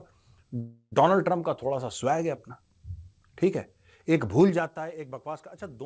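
From 0.60 to 0.94 s the speech stalls in a call audio freeze. The last sound is stretched into a fading buzz or hiss for about a third of a second, ending in roughly 60 ms of silence, then the speech picks up exactly where it broke off. That marks it as a freeze rather than a dropout: nothing is cut out, and everything after arrives 317 ms late. The likely cause is packets held up in transit until the jitter buffer ran dry.

At 4.40 to 4.78 s the level drops by about 15 dB with zipper noise. The level moves in 4 dB steps, about ten a second, with no smoothing. Each jump puts a small click into the waveform, so a rapid ticking rides on the speech while the level falls. A clean fader move would sound like a continuous slope. Here the drop is a string of discrete steps, and each one is audible. The fault sits on top of a G.722 call path that carries nothing above 8 kHz.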